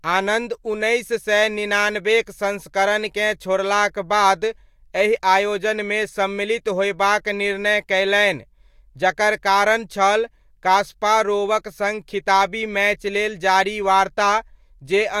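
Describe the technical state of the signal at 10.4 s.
At 10.4 s the speech signal is intact, with no audible dropout, distortion, glitch or other fault at that moment.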